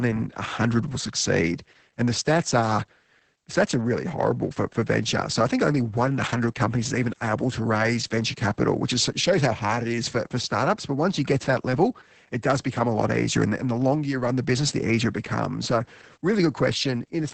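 This speech clip carries heavy Opus voice compression throughout, with the band topped at 8 kHz and a muffled, hoarse, faintly robotic tone. That fits SILK linear-prediction coding at roughly 10 kbps. Unlike a plain low-pass filter, the coarse excitation roughens the voice itself.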